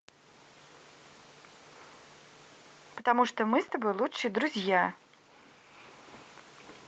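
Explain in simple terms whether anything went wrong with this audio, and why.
Nothing went wrong: the speech came through an ordinary internet call connection working as intended, with the sound squeezed by the call's compression and the highest frequencies stopping around 8 kHz, as is normal for that kind of call.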